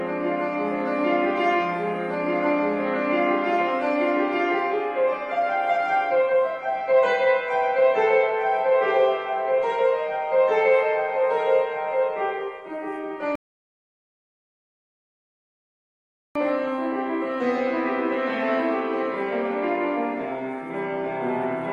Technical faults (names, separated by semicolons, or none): rebuffering stall